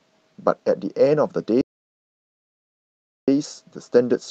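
From 0.67 to 0.73 s the speech turns briefly rougher and noisier, with no gap. This is a lost packet rebuilt from error correction. About 40 ms of audio went missing, which fits two lost 20 ms packets, and the Opus decoder filled the hole with the low-bitrate copy carried in the following packet. That copy is coarser than the 40 kbps, 8 kHz-bandwidth stream around it. The same short, grainy patch returns from 3.43 to 3.45 s, this time about 20 ms, consistent with a single packet.

Between those, at 1.61 s, the speech cuts off mid-flow into dead silence with no room tone at all, and it resumes abruptly at 3.28 s. This is an audio dropout to silence lasting about 1.66 s, and whatever was said in that stretch is gone. The input most likely dropped out, through a disconnected device, a failed link or a stray mute, while the recorder kept writing silence.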